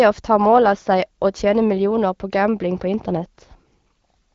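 No technical faults occur anywhere in this speech, which comes through an AMR wideband (HD Voice) codec at 12.65 kbit/s.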